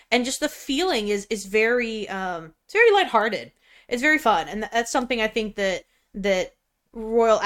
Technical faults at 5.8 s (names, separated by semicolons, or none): corrupt frame decoded